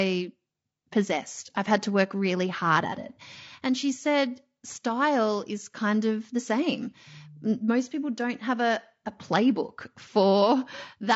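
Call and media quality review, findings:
Speech rough and grainy for the whole clip, damage plainly audible. Noise between pitch harmonics, top band dull and synthetic. Likely low-delay AAC compression (AAC-ELD), consistent with about 32 kbps. Short frames resolve harmonics poorly and starve the bit budget.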